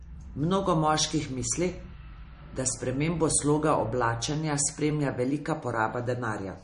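From start to finish, the speech has a dull top end. Nothing is heard above 10.6 kHz. Sibilants sound thin and metallic, and quiet detail swirls and warbles. The damage is plainly audible. The likely cause is MP3 compression at a low rate, which fits roughly 40 kbps. Starved of bits, the encoder cut the treble at a fixed point. It also dropped weak frequency lines that flicker on and off between frames.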